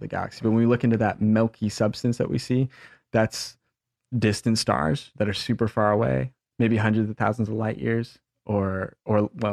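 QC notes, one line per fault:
No faults found at any point in this clip.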